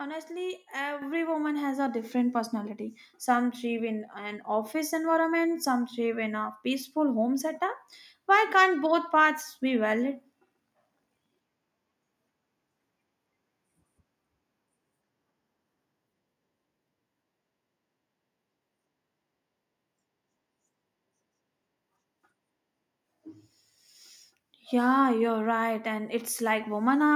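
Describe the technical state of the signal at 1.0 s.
At 1.02 s the microphone volume stepped up: automatic gain control raised the input level by about 7 dB in one jump, lifting speech and background together just before "woman has a". The waveform envelope widens abruptly, and the spectrogram brightens across all frequencies at once.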